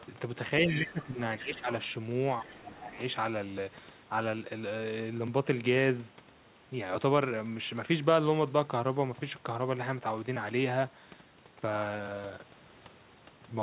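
A speech clip over a narrowband call line with nothing above 4 kHz, which fits G.711 at 64 kbps. Faint scraps of the other side's voice leak through at 0.0, 0.7, 1.0 and 2.44–2.71 s, some 15 to 25 dB under the talker, likely from residual echo the canceller missed. Speech is suppressed in double talk at 0.66–1.18, 1.39–1.68 and 2.41–2.98 s, dipping roughly 10 to 15 dB, likely the canceller ducking both voices together.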